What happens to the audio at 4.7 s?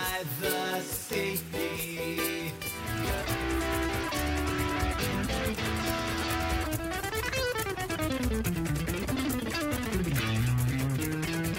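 Nothing goes wrong at 4.7 s; the audio runs through that moment intact, with no dropout, click or other fault.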